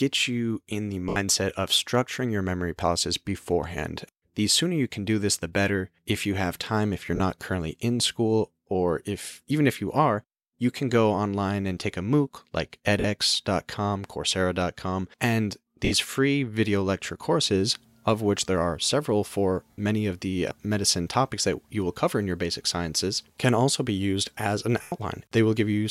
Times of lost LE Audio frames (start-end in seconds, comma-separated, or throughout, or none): 1.09-1.17, 7.16-7.20, 13.00-13.04, 15.85-15.92, 19.71-19.78, 24.82-24.92